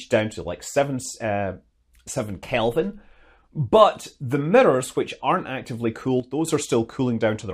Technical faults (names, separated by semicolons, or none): sudden gain jump